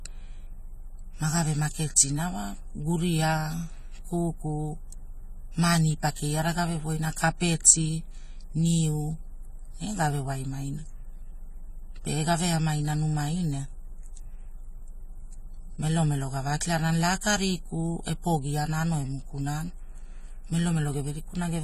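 Throughout, sibilants fizz and warble and the speech sounds dull, likely from AAC compression at a low bitrate; a spectrogram shows nothing above 14.1 kHz.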